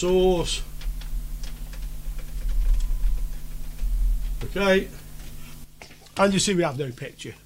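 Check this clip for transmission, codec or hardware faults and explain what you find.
Nothing stands out here; I listened for transmission, codec and hardware problems and didn't catch anything worth flagging.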